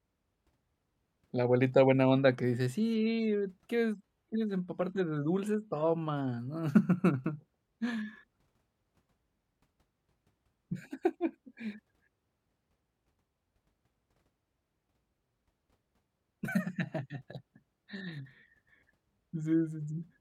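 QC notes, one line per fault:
4.02 to 6.02 s, adaptive stream at a lower bitrate. For two seconds the speech loses its upper treble and the top end turns thin and synthetic. Codec artefacts rise and smear the detail. The drop starts and ends abruptly, with no gap in the audio. The player switched to a cheaper rendition while the connection slowed, then returned. The sound fits a move from AAC-LC at about 96 kbit/s to HE-AAC at about 20 kbit/s, which rebuilds the highs instead of coding them.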